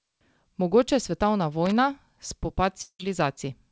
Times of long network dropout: 2.82-3.01

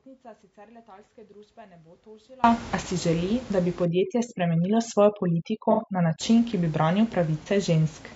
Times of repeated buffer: none

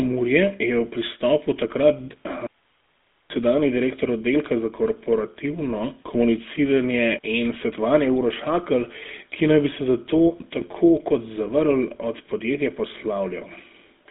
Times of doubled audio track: none

